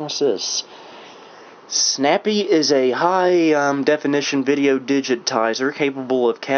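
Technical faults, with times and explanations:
No technical faults can be heard anywhere in this audio. There is nothing here that needs a time or an explanation.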